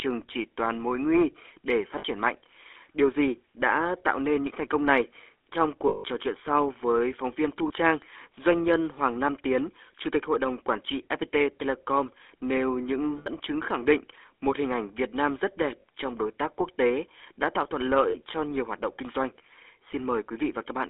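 From the start the whole thing runs through the GSM full-rate codec, with the band squeezed to roughly 300 Hz to 3.5 kHz. The speech has that buzzy, gravelly edge because the excitation is rebuilt from coarse regular pulses at a lean 13 kbps.

Then come lost GSM frames. At 1.98 to 2.05 s there's a 60 ms gap. At 5.88 to 6.05 s, between "thành công này trong" and "trò chuyện sau với", the longest one runs 160 ms. After that come 7.68 to 7.71 s, then 13.18 to 13.29 s between "nêu những" and "chứng khẳng định một", then 15.8 to 15.84 s after "rất đẹp", and finally 18.1 to 18.17 s. In each gap the decoder just holds the last good frame, so you hear a short metallic ring instead of a dropout.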